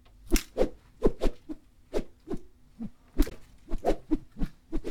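At 3.28 to 3.32 s, damaged data in the compressed stream makes the decoder lose sync. A brief glitch follows before it recovers.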